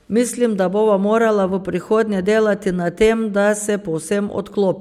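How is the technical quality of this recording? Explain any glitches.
The technical quality of this recording holds up, with no glitches to explain.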